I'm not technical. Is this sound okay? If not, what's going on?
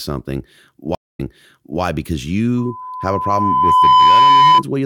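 No. Two things go wrong. First, at 0.95 s there's a stream reconnect: the connection drops, the player goes quiet for about a fifth of a second, reconnects, and starts decoding again from a point the server resends. Because of that resend, the speech picks up about 0.65 s earlier than where it stopped, so you hear a short stretch repeated. The whole hiccup is over by 1.81 s.

Second, from 2.57 s to 4.63 s there's loudspeaker feedback squeal: a microphone is picking up the speaker it feeds, and the sound keeps looping round, getting stronger at one pitch each time. Here that pitch is 1 kHz, a piercing whistle. It swells over roughly a second and a half until it is clearly louder than the speech, and it keeps sounding until 4.63 s.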